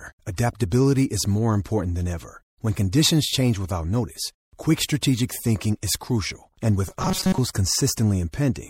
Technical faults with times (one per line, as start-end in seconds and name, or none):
0.00-8.70 MP3 compression
6.88-7.38 robotic sound from repeated short buffers